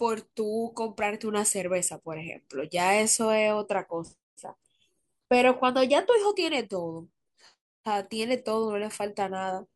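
No technical faults are audible anywhere in the speech.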